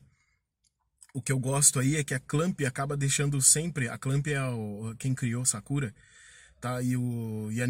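Nothing in this speech recording stands out as a technical fault; it just runs along without any glitch worth pointing to.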